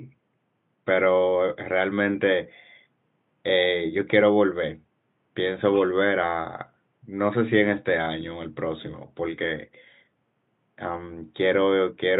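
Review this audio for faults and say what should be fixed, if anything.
Nothing here needs fixing; the only thing under the speech is a bit of ordinary room noise, sitting about 48 dB below it, which belongs to the recording itself.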